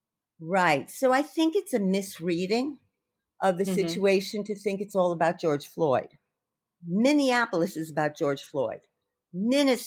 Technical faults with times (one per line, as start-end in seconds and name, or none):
none